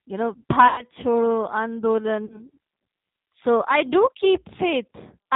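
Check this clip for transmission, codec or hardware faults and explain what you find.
The clip has two faults: G.729 codec coloration throughout, and two bursts of VoIP packet loss concealed by the speech codec.

G.729 codec, throughout the speech. The sound is narrowband and slightly rough, with the synthetic edge of a parametric coder that models the voice as a vocal-tract filter, a pitch predictor and a few pulses per frame, not the waveform itself. Nothing above 4 kHz survives, so sibilants are dull. The damage is plainly audible and points to G.729A at 8 kbit/s.

VoIP packet loss concealed by the speech codec, from 0.68 to 0.84 s just after "you know", and from 2.26 to 2.49 s. When packets go missing, the decoder keeps repeating its last pitch and filter settings at falling gain. The first gap is stretched into a fading buzzy tone or coloured noise, consistent with about 100 ms lost, or five packets. 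The second is a smaller loss, fitting about 40 ms, or two packets. Both stay weak until the decoder recovers.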